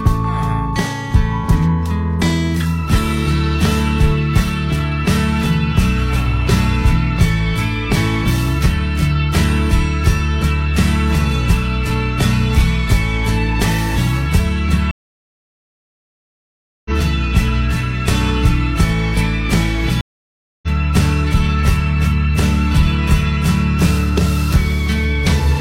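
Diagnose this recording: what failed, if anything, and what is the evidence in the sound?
A stream reconnect at the network stage dropped the connection twice. Silence at 14.91–16.91 s and 20.01–20.68 s, then playback resumes roughly two seconds and 0.7 s further along.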